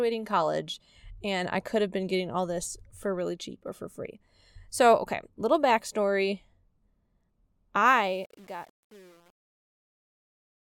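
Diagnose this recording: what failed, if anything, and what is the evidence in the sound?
The fade-out's gain stage, or the sample-format conversion after it, drops the signal to a short word length without dither, which points to roughly 8-bit resolution. The result is truncation distortion on the fade from 7.86 s to the end at 10.79 s, worst from 7.97 s onward. In the fade-out, starting around 8 s, as the speech sinks toward the smallest step the waveform collapses into coarse square steps, turning gritty.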